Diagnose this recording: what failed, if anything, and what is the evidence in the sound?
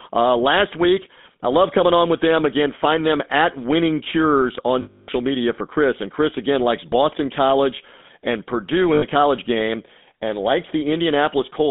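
The whole clip has gone through the GSM full-rate codec, at the codec stage. The speech has that buzzy, gravelly edge you get when the vocal tract is modelled and driven by a regularly spaced pulse train, with only every third excitation sample kept. It fits a 13 kbps full-rate link. The band is squeezed to roughly 200 Hz to 3.6 kHz, and the codec damage is plainly audible from start to finish.

There are also lost GSM frames, which is a network or radio-link problem concealed by the decoder. From 4.82 to 5.09 s, just before "media for", the sound freezes into a rough metallic ring for about 260 ms. The decoder keeps repeating the last good frame. A shorter hold, about 80 ms, runs from 8.94 to 9.05 s, right before "college game and likes".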